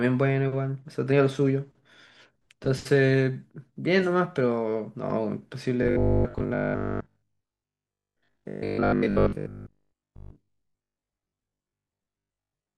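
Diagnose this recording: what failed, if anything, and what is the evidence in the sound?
From 5.82 s to 12.76 s the speech turns into robotic sound from repeated short buffers: a rigid, metallic 50 Hz buzz. The likely fault is a starved driver or buffer stage repeating roughly 20 ms chunks over most of this stretch. A spectrogram would show evenly spaced harmonic stripes, and the waveform would show copied, identical segments.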